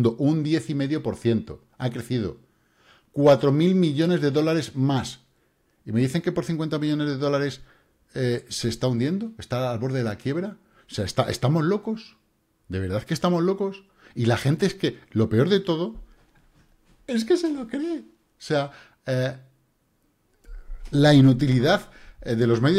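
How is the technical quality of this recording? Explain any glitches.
No glitches or technical faults can be heard here.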